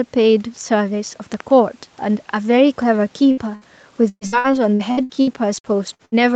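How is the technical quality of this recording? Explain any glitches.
The recording has three kinds of glitch: a double pop early on, two short dropouts just after 3.3 s, and a long stretch of choppy, robotic sound near the end.

Loud pop, 1.34 to 1.42 s: two sharp clicks in quick succession, peaking a few dB above the speech, which continues underneath. The likely cause is a voltage spike from a plug, switch or static. On the waveform they appear as two narrow spikes, and on the spectrogram as thin vertical lines across all frequencies.

Burst of packet loss, at 3.31 to 3.40 s and again at 3.55 to 3.64 s: about 60 ms of audio went missing each time. The receiver stretched the last sound over the hole as a fading buzz or hiss. The spectrogram shows smeared, flattened bands, and the speech resumes further on, with a short piece missing.

Repeated packet loss (robotic sound), 4.09 to 6.15 s: eleven gaps, the longest about 117 ms, were patched by repeating the preceding sound, so nearly a third of this span is filler. 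It sounds choppy, with pieces missing. The spectrogram shows repeated, frozen blocks alternating with real speech, and the waveform shows stuttering, decaying envelopes.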